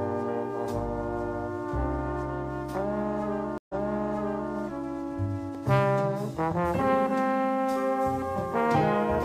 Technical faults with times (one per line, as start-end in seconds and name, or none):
3.58-4.53 stream reconnect
5.55 block of digital silence